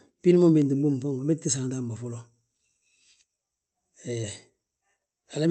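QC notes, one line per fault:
throughout: clock drift between sender and receiver. The sending end's clock runs roughly 4 percent fast, so audio arrives quicker than the receiver plays it and its jitter buffer keeps overfilling. Unlike random network jitter, the pressure is steady and one-directional across the whole speech clip.
0.10 to 5.47 s: repeated timing corrections. To drain the surplus, the receiver keeps discarding short slices, giving a slightly hurried delivery near 104 percent speed with faint, unevenly spaced hiccups. Every edit shortens rather than stretches, which separates this from packet-loss concealment repeats. Opus coding haze rides underneath, band-limited near 8 kHz, at a roughly 48 kbps setting.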